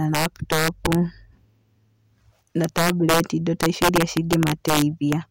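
Integer overflow runs through the whole speech clip. Peaks driven about 5 dB past full scale wrap to the opposite sign. Around one percent of samples produce harsh, violent cracks.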